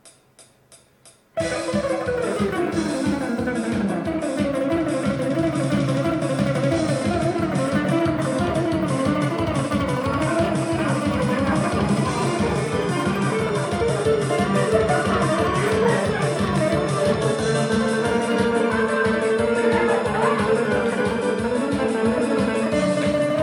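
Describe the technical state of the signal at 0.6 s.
At 0.6 s the signal is intact, with no dropout, distortion, glitch or other fault audible at that point.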